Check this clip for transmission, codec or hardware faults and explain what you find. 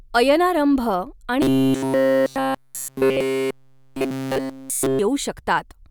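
One fault is present: robotic sound from repeated short buffers, running from 1.42 s to 4.99 s. Across that span the speech turns into a rigid, metallic buzz fixed at 133 Hz, while the rough shape of the words survives. The likely cause is audio arriving too seldom, so the playback side loops the last short buffer instead of playing new material. A 133 Hz buzz fits a buffer of about 7.5 ms, and the repetition covers essentially the whole affected stretch.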